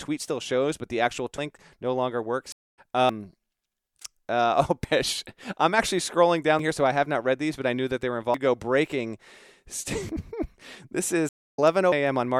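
Audio missing between chunks first appears at 1.38 s and recurs at 3.09, 4.84, 6.59, 8.34, 10.09 and 11.92 s. Each time the speech jumps ahead with no silence, dropping around a third of a second, likely because the audio is handled in 2-second chunks and a piece is lost at each handover.

A stream reconnect interrupts the speech from 2.52 to 2.78 s, and again from 11.29 to 11.59 s, with silences of 198 ms and 262 ms. After each break a fresh decoder picks the stream up roughly a fifth of a second further on, so that much speech is skipped.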